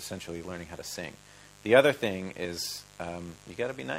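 A steady mains buzz runs through the whole clip: sharp switching spikes at twice the 50 Hz mains rate leak into the signal, spreading harmonics up into the kilohertz range. The result is a raspy, constant buzz sitting roughly 25 dB below the wanted sound.

At 2.45 s an overlap between stream segments removes about 30 ms of audio as the player trims time stamps it treats as duplicated. The waveform jumps across the gap, heard as a tiny skip.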